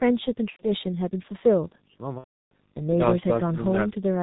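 Throughout, the speech carries the G.723.1 codec's heavy damage, consistent with its roughly 6.3 kbit/s mode. Nothing above 4 kHz survives, and the 30 ms frames update the vocal model slowly, so the voice sounds muffled and hoarse with smeared consonants.

VoIP packet loss concealed by the speech codec occurs at 0.50 to 0.68 s, a 90 ms gap that fits three lost 30 ms frames. The decoder extends the last pitch and filter at falling gain, so the sound stretches and fades. A second, longer loss at 2.18 to 2.52 s spans about 330 ms, or roughly eleven frames, and is muted from the third lost frame onward, with the voice staying weak or distorted after packets return.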